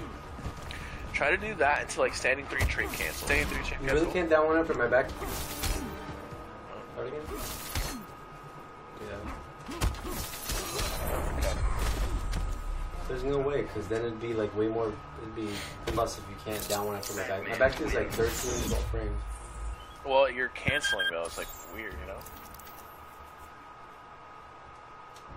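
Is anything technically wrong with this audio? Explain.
Yes. Damaged data in a compressed stream appears at 3.26, 5.07 and 7.26 s, 15.96–15.98 s and 19.70–19.74 s. Corrupted bytes make the decoder misread frames and resynchronise, producing brief chirps or blips.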